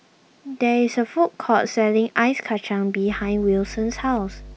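From 3.07 s to the end, mains hum appears: a fairly strong, steady 50 Hz tone leaking in from the power line, pitched and constant, unlike shapeless rumble.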